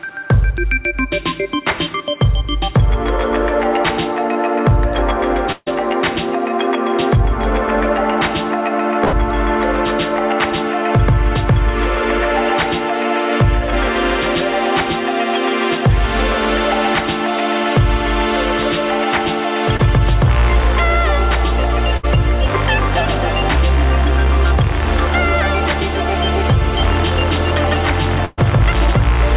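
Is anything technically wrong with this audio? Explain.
Yes. There are two kinds of packet-loss fault, heard over a call path whose band stops at 4 kHz, which fits a G.711 A-law codec.

A burst of packet loss occurs four times: 5.52–5.68 s, 9.04–9.15 s, 21.97–22.05 s and 28.25–28.39 s. In each, a run of packets was lost or arrived too late. The receiver extended the last sound and faded it, so you hear a held buzz or hiss for about 60 to 140 ms before the audio resumes with that stretch gone. The first and last bursts drop into brief silence, about 20 ms and 10 ms. That length and fade-out separate a burst from the single short loss below.

A short concealed packet loss occurs at 19.77–19.81 s. About 20 ms never reached the decoder in time. The receiver synthesised a continuation and blended it back into the real audio, leaving only a quick smear or wobble with no audible fade or silence, unlike the longer bursts.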